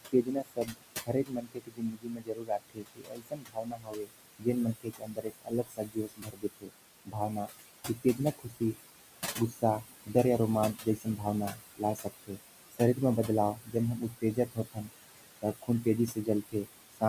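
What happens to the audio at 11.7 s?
Speech is cut by the noise suppressor between 10.74 and 12.39 s. The suppressor judges parts of the speech to be background noise and turns them down with it, by about 21 dB at the deepest. Soft consonants and word endings sound swallowed and faint, for roughly 0.7 s in total.

Noise suppressor artifacts are also present here. Frame by frame, the suppressor lowers the bands it takes for steady noise, by about 19 dB. The room noise sits about 11 dB below the speech. The noise sinks between the words and rises under them.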